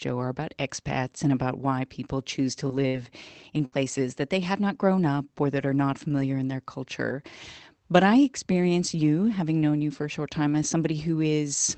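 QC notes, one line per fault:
2.41–3.74 s, repeated packet loss (robotic sound): between "and about why people" and "that they have not", four dropouts, the longest 71 ms, remove about 180 ms of audio. Each hole is patched by stretching the preceding sound, so the passage turns choppy with pieces missing. On a spectrogram, short smeared blocks of repeated harmonics sit between broken segments, all under the 8 kHz ceiling of the Opus call path. The waveform shows flattened, looping chunks.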